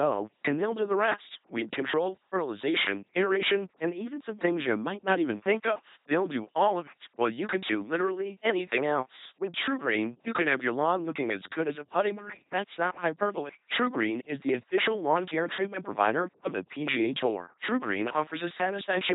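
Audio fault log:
throughout, LPC-10 vocoder: heavily buzzy, robotic speech with nothing above 3.9 kHz. Each moment is rebuilt from pulses or hiss through a small filter, which fits about 2.4 kbit/s.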